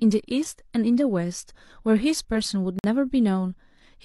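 A speech recording with one gap between stream segments: the timestamps of two adjacent segments fail to meet, and the player pads the hole with silence. At 2.79 s the sound drops out abruptly for about 51 ms, resuming at 2.84 s with hard edges. Nothing is missing, only delayed.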